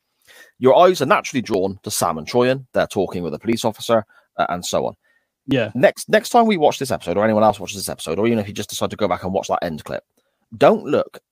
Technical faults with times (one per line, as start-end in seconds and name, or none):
1.54 audio missing between chunks
3.53 audio missing between chunks
5.51 audio missing between chunks
9.49 audio missing between chunks